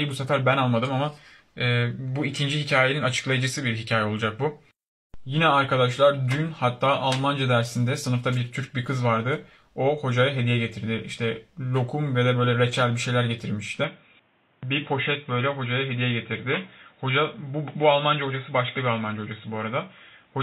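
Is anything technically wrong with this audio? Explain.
Yes. From 13.84 s to the end, everything above 3.8 kHz vanishes and the sound goes dull and boxy, with faint new background noise but no gap or level jump. That's likely an input switched to a poorer, narrower-band device mid-recording.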